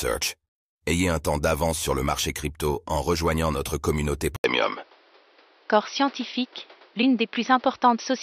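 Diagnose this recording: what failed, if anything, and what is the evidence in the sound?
At 4.36 s the speech drops out for 80 ms, then returns duller and boxier, with nothing above 5.9 kHz. The level shifts by a few decibels and a new noise floor appears, roughly 35 dB down. This is likely an input switched to a poorer device at the driver stage.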